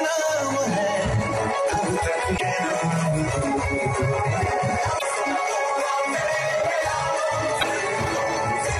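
Three short bursts of damaged data in a compressed stream break up the audio, at 2.37 to 2.41 s, 4.95 to 5.02 s and 7.56 to 7.63 s, each lasting roughly 40 to 70 ms. At these points the decoder meets corrupted frames, loses its place and hunts for the next valid frame header, so each burst comes out as a brief chirp, squawk, click or short hole. A plain dropout would leave silence or a clean gap, and a click would be a single sharp tick.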